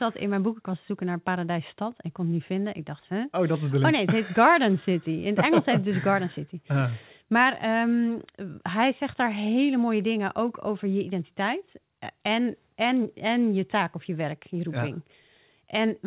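No faults turn up anywhere in this bit of speech, which came over a call link whose narrowband sound, with nothing above 4 kHz, fits a G.711 mu-law telephone codec working just as it should.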